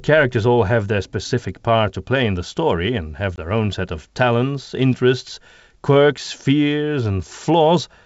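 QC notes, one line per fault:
3.36–3.39 s, packet loss on an ADPCM call: After "the story and have", a hard-edged silent hole of 20 ms, about one packet. The G.722 decoder's predictor and step size drift from the sender's, so sound resumes briefly slightly distorted before "own set of talents".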